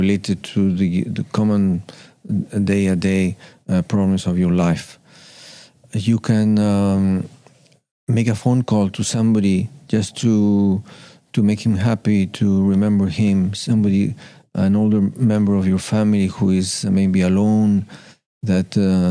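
No technical faults are audible.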